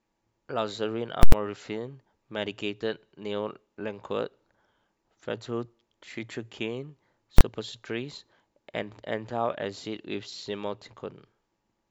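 A speech recording with two bursts of invalid numbers at full scale, where a calculation produced infinite or invalid values that were pinned to the maximum level. From 1.23 to 1.32 s the output locks for about 93 ms, which fits a 4096-sample block: a loud pop, dead silence, then another pop. At 7.38 to 7.41 s a 23 ms block collapses into a single bang. On a waveform both appear as flat slabs far beyond the speech peaks, and on a spectrogram as bright full-band vertical lines at the edges.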